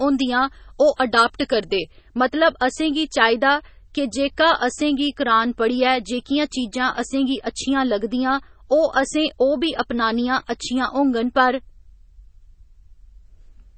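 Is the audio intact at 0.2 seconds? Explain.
No. At 0.2 seconds two faults overlap. The first is pre-emphasis left on, which runs from 0.0 to 2.0 s. The treble was boosted for transmission and never cut back afterwards. At 10 kHz it sits about 11 dB above 1 kHz, which fits a 50 µs FM curve. The speech sounds thin and overly bright. Sibilants hiss and stand out sharply.

The second fault runs through the whole clip. It is low-bitrate audio saved at a high bitrate. The sound carries the smeared, swirly artefacts and dulled top end of a heavily compressed MP3, likely first encoded around 24 kbit/s. It was then saved again at a much higher rate, near 192 kbit/s. That larger file cannot bring back what the first encoding removed. The damage remains audible at this moment too.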